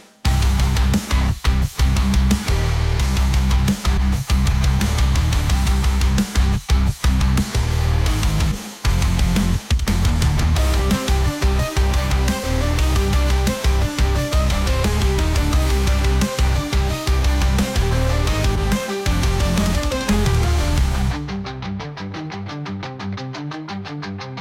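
The audio jumps forward five times, at 3.97–4.02 s, 7.21 s, 8.51–8.56 s, 12.43 s and 18.55–18.59 s. Each jump drops about a fifth of a second of material. These are compressed frames skipped: runs of roughly ten 20 ms codec frames never reach the output, either because they are missing from the stream or because the decoder rejected them as corrupt.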